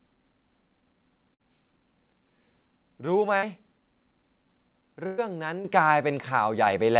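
Three bursts of packet loss hit this speech. At 1.34 to 1.41 s and again at 3.37 to 3.44 s, about 60 ms goes missing each time, and the receiver papers over it by stretching the last bit of sound and letting it sag, so you get a brief buzz or hiss before the talk picks up slightly further along. The third, 5.06 to 5.20 s, is longer, roughly 120 ms, and the concealment drags on longer, about 113 ms.

Then the microphone volume steps up twice: at 5.65 s by about 8 dB, and at 6.67 s by about 4 dB. Each is an abrupt jump where voice and background get louder together, the signature of call software nudging the device's input level because it judged the mic too quiet. Underneath it all the call path has a telephone-band character, nothing above 4 kHz, consistent with G.711 A-law at 64 kbps.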